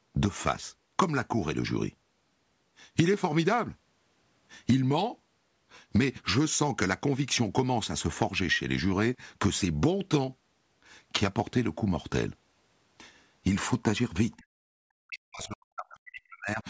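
Speech, with the level pulled down by about 35 dB from 14.37 to 14.46 s and by about 40 dB from 14.94 to 16.61 s, likely speech suppressed in double talk, where the call's echo canceller turned the talker down along with loudspeaker echo. Unlike packet loss, these are level reductions by that suppressor.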